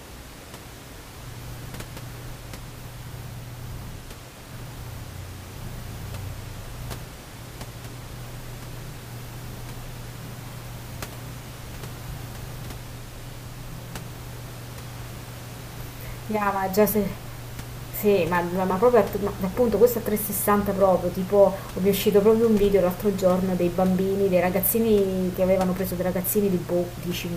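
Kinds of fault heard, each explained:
No faults heard.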